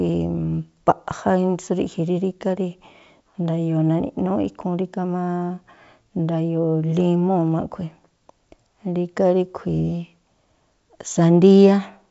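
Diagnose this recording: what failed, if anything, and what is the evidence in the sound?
Nothing failed: the speech comes through a G.722 wideband telephone path at 64 kbit/s, with the band closing off around 7.7 kHz and at most a faint trace of the coding in the upper band.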